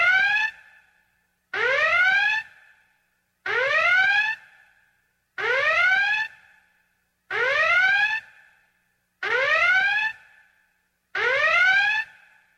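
Nothing is technically wrong with this audio.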